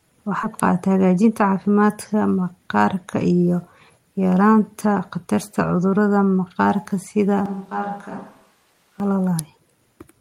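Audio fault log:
0.43 s, skip ahead: about four tenths of a second of speech is simply gone, with no fill, and the two sides are butted together so the sentence lurches forward. The waveform shows an abrupt splice with no gap; the spectrogram shows formant tracks breaking discontinuously at that instant.
0.69 to 2.29 s, jitter buffer speed-up: speech runs about 8% fast at unchanged pitch, ending just before "maqaarka iyo", as short pitch-period slices are repeatedly cut to drain excess buffered delay, roughly 150 ms in total. Syllables look compressed on the waveform, with harmonic spacing on the spectrogram unchanged.
7.46 to 9.00 s, switch to a distant microphone: right after "khatarta cudurrada maqaarka sida" the sound turns hollow and roomy, drops about 10 dB and loses bass, with a noise floor around 30 dB under the speech, likely from falling back to a farther microphone. Spectrogram shows thinner lows, smeared reverberant tails, raised background.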